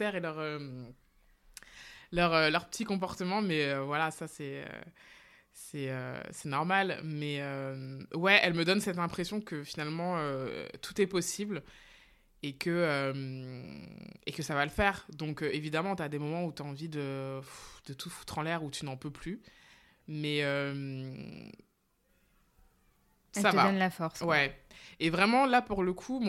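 No technical faults can be heard anywhere in the speech.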